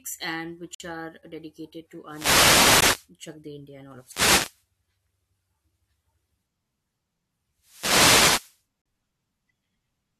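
Speech, interrupted by hard-edged silent holes at 0.75 to 0.80 s (about 55 ms), at 2.81 s and at 8.82 to 8.86 s (about 39 ms). These are gaps between stream segments: the timestamps of adjacent chunks, which fit 2-second segments, fail to meet, and the player pads the shortfall with silence, so time is added but no audio is lost. Three bursts of hissy static also swell over the speech, from 2.07 to 3.10 s, 3.95 to 4.65 s and 7.59 to 8.63 s. These are wireless microphone noise hits: reflections partly cancel the analogue FM radio signal, and as it fades the receiver's own noise rises and swishes across the sound.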